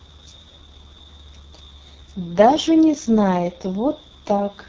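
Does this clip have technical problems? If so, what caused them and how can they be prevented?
Yes. The speech is marked by AMR wideband (HD Voice) codec damage for the whole clip. It sounds rough and raspy throughout, with a degree of grit that fits AMR-WB's lowest 6.6 kbit/s mode. The codec rebuilds the voice from a vocal tract model driven by sparse pulses, so so few bits leave the harmonics coarse and buzzy. On a spectrogram, the harmonic structure looks smeared and blotchy up to 6.4 kHz, a band of diffuse noise fills 6.4 to 7 kHz, and nothing appears above that. To prevent this, carry the call at 12.65 kbit/s or higher.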